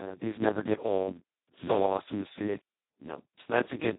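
The whole clip runs through the Speex codec at what sounds like its bottom setting, which fits a bitrate of about 2 kbps. At that rate the CELP coder has almost no bits for the excitation, so it works more like a vocoder. The speech comes out hoarse, noisy and robotic throughout, with heavy codec damage, and there's nothing at all above 3.9 kHz, leaving it dull and boxed-in.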